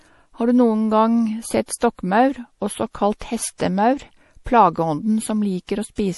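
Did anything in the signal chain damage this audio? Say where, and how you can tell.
Yes. The damage sits at the codec stage. Throughout the speech there is plainly audible MP3 compression damage: nothing survives above 11.5 kHz, and the sibilants have a watery, swirling quality as weak frequency components drop in and out between frames. The likely cause is a low-bitrate MP3 encode, consistent with roughly 48 kbps. A fixed treble ceiling with this frame-to-frame warble separates it from an analogue low-pass or a plain resampling filter, which would cut cleanly without the swirl.

Pre-echo also comes from the codec, at 3.58 to 3.60 s and 5.67 to 5.69 s. In each spot a hiss of about 21 to 22 ms runs ahead of a sharp onset, and the attack itself sounds softened. The encoder spread its quantisation noise across a whole transform block, so noise meant for the loud onset leaked into the quiet moment before it. 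Because the hiss comes only before attacks, it can't be a click, a dropout or steady background noise.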